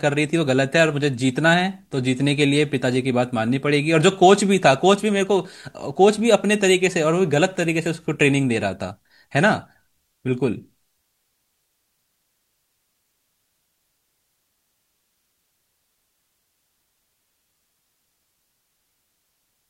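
No technical faults can be heard anywhere in this speech recording.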